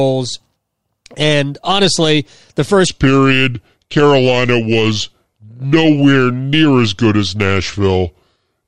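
From 2.87 s to the end, a section at the wrong speed: likely a clock mismatch slows playback to 0.774x, so speech drops about four semitones, deep and dragging.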